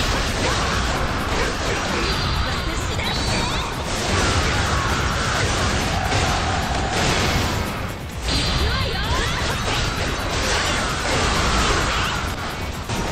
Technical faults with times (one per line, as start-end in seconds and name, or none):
12.34-12.39 corrupt frame decoded